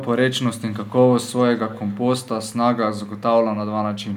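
Echo leak at 0.72–0.95 s, 1.57–1.98 s and 3.08–3.21 s: a faint copy of the speech trailing by 189 ms, very quiet, likely residue a far-end echo canceller failed to remove.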